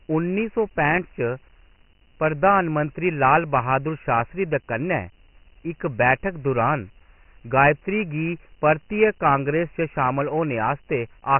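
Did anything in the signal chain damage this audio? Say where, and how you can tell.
Yes, at the codec stage: the speech carries Dialogic VOX ADPCM damage from start to finish. Nothing survives above 3 kHz, and a coarse, gritty hiss rides on the speech and tracks its level, which is heavy quantisation noise. The codec stores each sample as a 4-bit step that adapts to the signal, so the coding error rises and falls with the speech. A 3 kHz ceiling points to a 6,000-samples-per-second VOX file, about 24 kbps.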